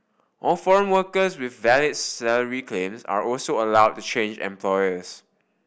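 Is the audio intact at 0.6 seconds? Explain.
Yes, at 0.6 seconds the speech plays through intact, with no dropout, click, distortion or other fault to be heard there.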